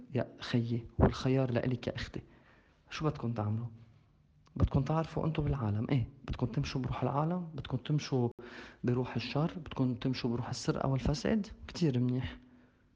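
At 8.32 s the audio cuts abruptly to silence for about 73 ms and resumes at 8.39 s, picking up where it left off. This is a Bluetooth stall, likely caused by interference delaying packets until the headphones' buffer ran empty and playback waited for the resent data.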